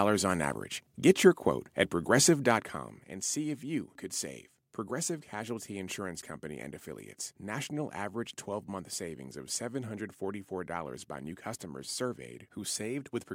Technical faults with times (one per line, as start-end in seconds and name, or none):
2.44-3.10 zipper noise